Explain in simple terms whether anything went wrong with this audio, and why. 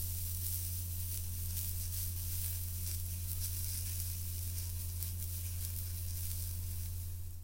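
Everything plays too fast and too high from start to finish, a fault called wrong sample rate. The audio runs 1.5 times faster than normal and sits about seven semitones sharp, which fits sound recorded at 32 kHz being played back at 48 kHz without conversion.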